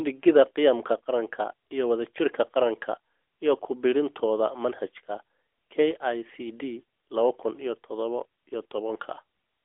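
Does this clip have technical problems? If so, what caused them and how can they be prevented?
No, nothing in this recording stood out as a technical problem on listening.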